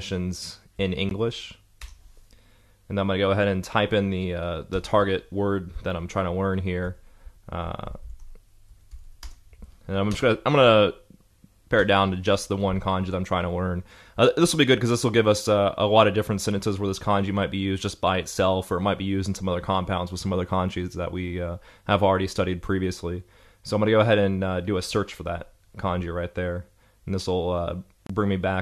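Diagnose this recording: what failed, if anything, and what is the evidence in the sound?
Gap at a join of encoded pieces, at 1.09 s (about 17.5 ms) and from 28.07 to 28.10 s (30 ms): the fault sits in the codec stage. Separately encoded segments were concatenated untrimmed, so encoder start-up delay and last-frame padding leave brief silences with smeared edges before the sound resumes.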